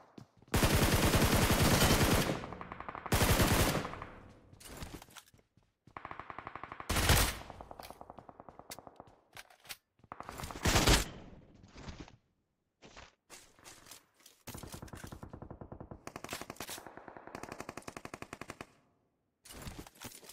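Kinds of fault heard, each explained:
Call bitrate drop: the encoder's rate falls from 64 to 8 kbps around 10.54 to 14.27 s, coding coarsely and cutting highs from 20 kHz to 8 kHz, so audio turns muffled and rough.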